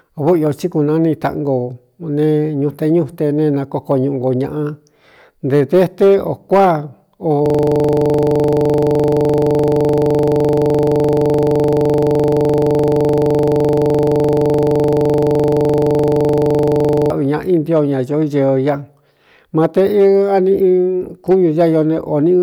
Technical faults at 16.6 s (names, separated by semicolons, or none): hard clipping; system hang loop